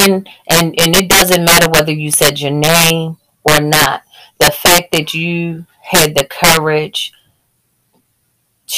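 It's a speech clip hit by integer overflow in five stretches: 0.00–0.06 s, 0.51–2.90 s, 3.48–3.86 s, 4.42–4.98 s and 5.95–6.57 s. The level was driven about 6 to 10 dB past full scale without limiting, so peaks wrap to the opposite sign and crack far harder than clipping.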